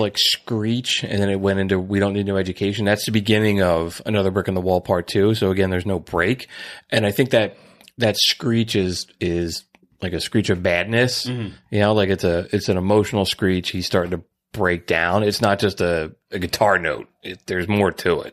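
No technical faults can be heard in this recording.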